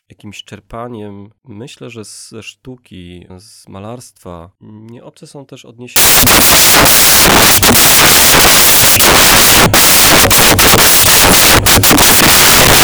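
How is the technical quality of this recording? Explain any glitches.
The recording breaks down partway through. Samples built from the wrong bytes, from 5.96 s after "są też" to the end: misassembled bytes promote jittery low bits, producing loud, harsh broadband noise, close to white on loud sounds.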